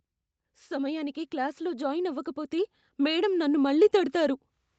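A speech recording passed through a call path shows automatic gain rising from about 0.41 s to 4.42 s. The control treats the input as too quiet and raises its gain steadily by about 8 dB, so the voice and the room noise beneath it swell together rather than the talker getting louder. On a waveform the envelope widens progressively across those four seconds, noise floor included. A spectrogram shows the whole band, pauses too, brightening uniformly. Content stops near 8 kHz, consistent with wideband call coding.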